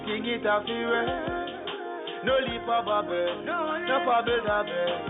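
No technical faults are audible anywhere in the clip.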